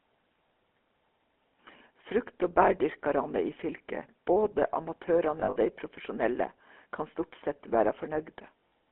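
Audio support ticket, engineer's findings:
Buzzy, gravelly roughness on the speech for the whole clip, with nothing above about 3.4 kHz and thin lows below 250 Hz. Consistent with the GSM full-rate codec at 13 kbps. Pulse-driven vocal-tract model, sparse excitation, audibly coarse.

Rough metallic ringing at 5.40–5.72 s and again at 8.68–8.71 s. Lost GSM frames: the decoder repeats the last good frame at falling level. The first burst is scattered, with its longest gap under a tenth of a second.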